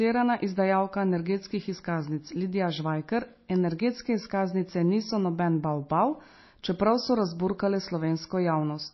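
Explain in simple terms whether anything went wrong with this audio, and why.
Yes, something went wrong: the audio was likely squeezed too hard by MP3 compression, which throws away detail it judges unimportant. Here nothing above about 5.8 kHz survives, so from start to finish the speech sounds dull and muffled, with a watery, swirly edge.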